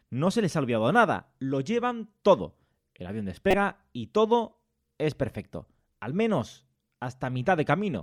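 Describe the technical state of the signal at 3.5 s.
At 3.5 s the speech is hit by damaged data in a compressed stream, lasting from about 3.50 to 3.54 s. Corrupted bytes in the coded stream leave the decoder unable to read the frames there, so it loses sync and hunts for the next valid frame header. The result is heard as a chirp, squawk, click or short hole.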